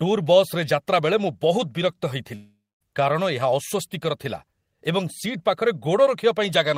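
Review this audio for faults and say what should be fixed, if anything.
From 2.35 to 2.83 s the speech trails into a fading buzz, then about 240 ms of silence, and resumes with roughly 460 ms missing. This is likely a long network dropout; unlike a brief packet-loss click, the gap outlasts concealment and the lost part never returns. Forward error correction and a more robust network path would prevent it.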